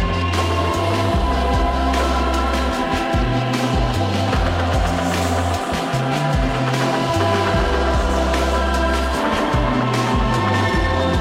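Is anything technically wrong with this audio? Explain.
No, nothing technically wrong can be heard here.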